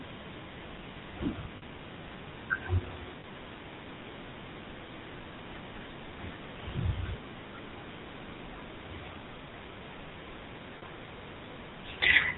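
The whole recording went through a GSM full-rate codec, which fits a 13 kbps stream. It drives a vocal-tract model with sparse, regularly spaced pulses and discards everything above 4 kHz, so the speech sounds dull, buzzy and gravelly throughout. Lost GSM frames at 1.56–1.63 s (60 ms), 3.20–3.25 s (40 ms), 5.22–5.25 s (20 ms) and 10.78–10.83 s (40 ms) were filled by repeating the last good frame. Each gap becomes a brief, rough, metallic ring.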